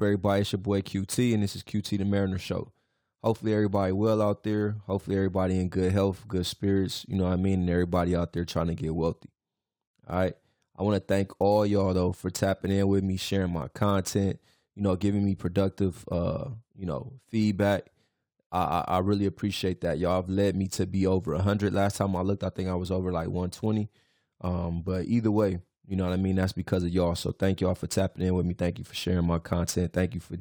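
Across the whole clip, the converter's sampling clock wanders by roughly 7 microseconds, so each sample lands slightly early or late. This sample clock jitter adds a rough hiss about 30 dB below the speech, strongest on loud, bright sounds and gone in pauses.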